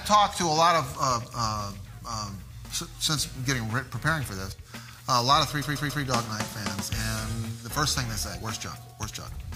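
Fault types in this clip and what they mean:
repeated frames: a stutter at 5.61 s where a 139 ms stretch plays three extra times, as the same compressed frames were decoded again, adding 0.42 s.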